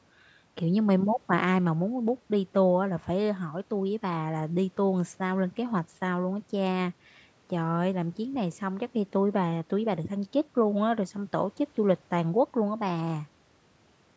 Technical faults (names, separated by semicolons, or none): none